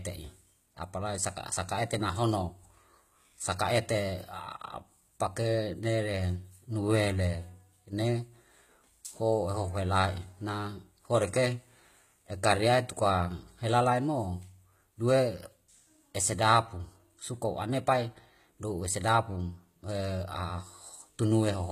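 A speech recording with plainly audible HE-AAC compression throughout. The treble sounds bright but synthetic, with gritty, lisping s sounds and nothing above 14.9 kHz, unlike a plain low-pass that simply dulls. This is likely spectral band replication at a rate fitting roughly 20 kbps.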